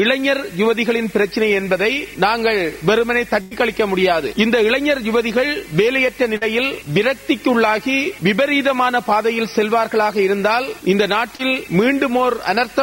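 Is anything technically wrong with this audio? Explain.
Yes, there are three packet-loss faults.

Burst of packet loss, from 3.41 to 3.53 s: roughly 100 ms of consecutive audio failed to arrive in time for playback. The receiver covered the gap by extending the last sound it had and fading it down over about 96 ms. This produces a held, dimming stretch in place of the real material. When playback resumes, it picks up further along, and the lost section never returns.

Short concealed packet loss, at 6.37 to 6.43 s and again at 11.35 to 11.41 s: each time, about 40 ms of data missed the decoder's deadline. The receiver synthesised a brief continuation of the preceding sound, around 43 ms and 37 ms respectively, and then crossfaded back into the real signal. Each event is heard as a quick smear or slight wobble, and any very short sound at that instant may be gone.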